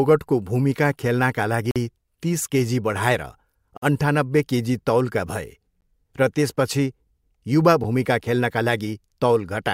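At 1.71 to 1.76 s, 3.77 to 3.82 s, 5.81 s and 7.84 s the speech breaks into hard-edged silence, each a gap between stream segments, spaced about 2 s apart to match the segment length. Mismatched time stamps leave holes of roughly 47, 50, 14 and 8 ms that the player fills with silence. Unlike a dropout, no speech is missing: the sound simply resumes slightly later.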